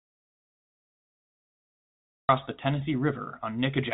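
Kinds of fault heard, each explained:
Audio dropout to silence: The clip opens already dead, with silence and no room tone at all until about 2.29 s, when the speech cuts in mid-flow. That points to the input having been lost, likely a disconnected device, a failed link or a stray mute, while the recorder kept writing silence. Whatever was said in that first stretch is gone. The narrow phone band, topping out near 3.8 kHz, is just the telephone-style coding doing its job.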